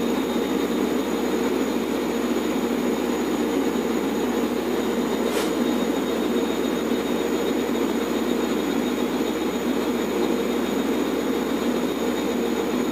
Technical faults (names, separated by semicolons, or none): low bit depth with noise shaping